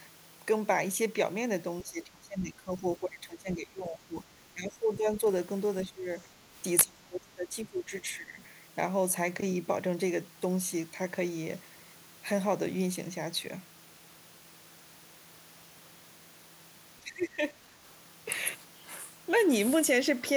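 Speech suppressed in double talk at 1.83–4.31, 4.54–5.23, 5.84–6.09, 6.26–6.32, 6.85–8.42 and 17.01–17.75 s. The speech dips by up to about 25 dB, likely because an echo canceller turned down the overlapping speech along with the echo.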